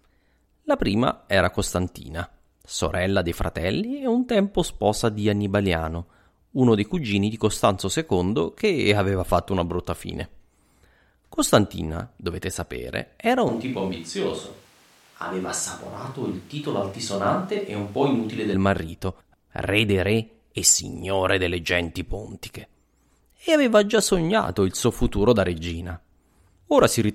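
From 13.49 s to 18.54 s the speech turns roomy, hollow and bass-light, about 5 dB quieter, with more room noise. This suggests a switch to a distant microphone, likely because the close one failed. Unlike added reverb, level, tone and noise change together, abruptly.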